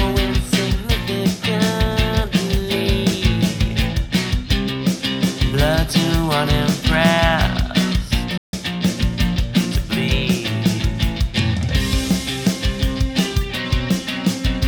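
At 8.38 s there is a playback stall. The sound cuts out mid-flow and stays silent for about 154 ms, until 8.53 s, then resumes. The likely cause is the player running out of buffered data, or its output thread being blocked.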